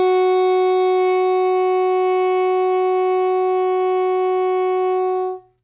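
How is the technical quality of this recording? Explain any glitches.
The technical quality of this music recording is good, with no glitches to explain.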